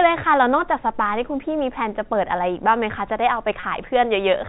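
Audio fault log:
3.60–3.63 s, packet loss with pitch repetition: about 30 ms of the speech drops out, consistent with a single lost packet. The receiver bridges the gap by repeating the last pitch period. This gives a brief held, buzzy tone before the speech resumes through the 4 kHz-limited G.711 telephone band.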